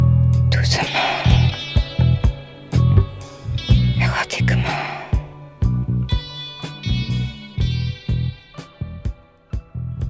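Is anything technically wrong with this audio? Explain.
No, nothing technically wrong stands out here; the audio just runs along without any problems worth flagging.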